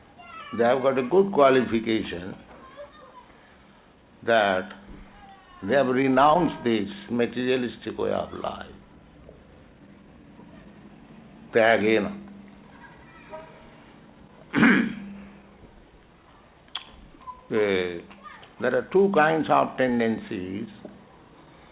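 There are no technical faults to describe in time order; the call path behaves as a G.711 mu-law link normally does, with nothing above 4 kHz.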